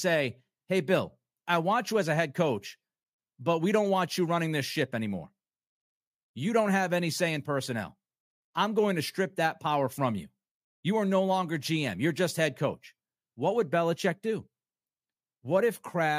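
No technical faults can be heard anywhere in the recording.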